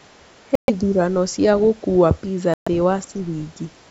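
Speech cuts to sudden silence at 0.55 to 0.70 s and 2.54 to 2.68 s, then resumes as if it had kept playing. These are likely Bluetooth dropouts, where packets arrived too late and were discarded.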